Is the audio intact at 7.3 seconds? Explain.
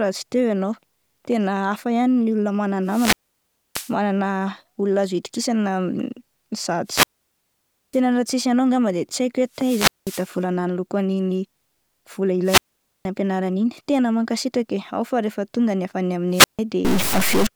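No, 7.3 s falls inside a wireless microphone squelch dropout from 6.85 to 8.02 s: the radio signal fades, hiss rises, then the receiver mutes for about 0.9 s before "raha tsisy anao angamba".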